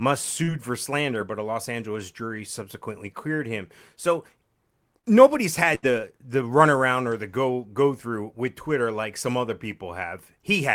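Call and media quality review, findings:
Short concealed packet loss, 0.43–0.51 s, right before "for slander but a": brief smear where about 40 ms never arrived in time. Jitter buffer/decoder concealment stretched the last sound to cover it, then crossfaded back to real audio.

Short concealed packet loss again, 5.00–5.06 s: same wobble, roughly 40 ms gap, concealment filler carried over from the preceding sound, then blended out.

Burst of packet loss, 5.75–5.85 s: about 80 ms dropped. Concealment held and faded the last sound, then audio jumps ahead with that stretch missing. Network-side loss, several packets in a row.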